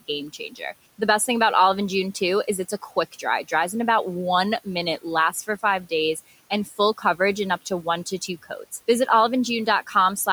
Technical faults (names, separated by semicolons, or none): speech cut by the noise suppressor